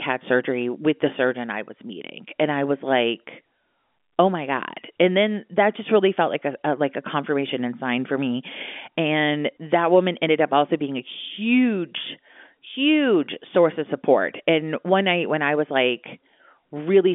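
Nothing's wrong with this speech recording; it's simply come down an ordinary G.711 telephone line, so there's that familiar narrow phone band with nothing above about 3.7 kHz and only the faint level-following hiss the format always carries.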